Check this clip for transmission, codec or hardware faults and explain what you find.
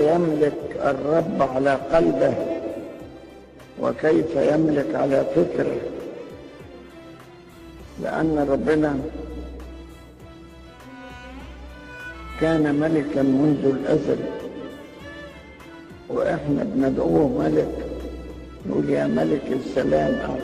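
Nothing audible points to a transmission, codec or hardware fault anywhere in the sound.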